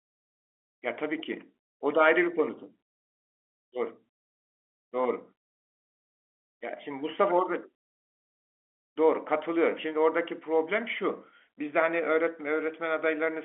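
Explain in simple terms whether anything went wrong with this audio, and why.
Nothing went wrong: the speech has the narrow, slightly boxy sound of ordinary telephone coding, with nothing above about 3.7 kHz, which is simply how a phone line sounds and not a defect.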